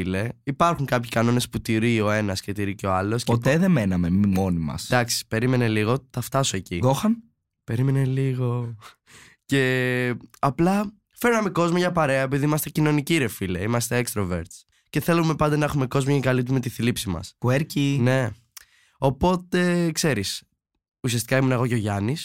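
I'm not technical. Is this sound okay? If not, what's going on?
Yes, nothing stood out as a problem when listening to this speech recording.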